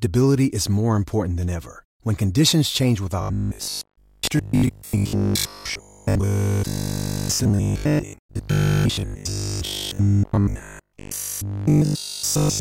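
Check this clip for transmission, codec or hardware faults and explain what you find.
One fault is present: robotic sound from repeated short buffers, from 3.21 s, just after "conditions change", to 12.59 s. The speech turns into a rigid metallic buzz fixed at 50 Hz, which fits a 20 ms buffer replayed over and over, with most of the real audio skipped. The likely cause is audio arriving too seldom to keep playback fed. Dropouts leave gaps of silence, but this fault does not. Its steady buzz pitch sets it apart.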